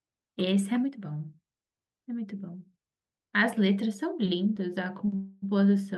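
At 5.05 to 5.09 s there is a short stall from a late packet. The next packet was not there when it was due, so the jitter buffer ran dry and the receiver stretched the last bit of speech for about 19 ms until the packet turned up, then carried on from the same point. Nothing is lost; the sound is briefly held too long, with a slight buzz or dip, and everything after it sits 19 ms later.

From 5.15 to 5.44 s comes a longer call audio freeze. For about 268 ms the speech stops moving forward and the last sound is carried on as a buzz or hiss that fades. It never drops to silence. Playback then resumes where it left off, adding a 268 ms gap without skipping audio. The likely cause is packets held up in the network long enough to empty the jitter buffer again.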